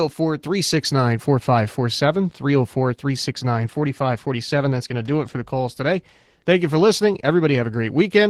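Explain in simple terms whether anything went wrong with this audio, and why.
Yes, something went wrong, and it's there from start to finish: the speech has been squeezed by Opus voice compression set quite tight. The codec splits the sound in two, modelling the lower part of the voice with a speech predictor and roughly coding the top end as a separate layer. With so few bits to spend, the fine detail of the voice gets approximated, so it comes across as hoarse and a bit robotic the whole way through.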